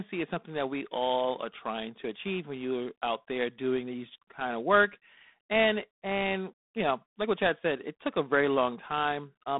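G.726 ADPCM coding affects this speech clip from start to finish. Each sample carries only a few bits describing its difference from an adaptive prediction, and the coarse steps leave a harsh, rasping hiss that rises and falls with the speech level. The damage is plainly audible and fits the 24 kbit/s mode. The sound sits in a telephone band of about 200 Hz to 3.7 kHz, with nothing above 3.8 kHz.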